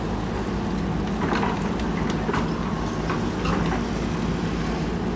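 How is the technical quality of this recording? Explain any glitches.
The technical quality is good, and there are no glitches in this recording to explain.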